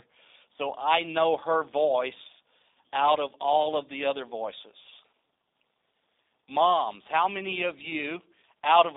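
G.729 codec damage runs through the whole speech clip: everything above 3.7 kHz is missing and nothing comes through below 300 Hz. The coder rebuilds speech from a vocal-tract filter, a pitch predictor and sparse pulses, which fits an 8 kbit/s G.729A link. That leaves a plainly audible rough, synthetic texture.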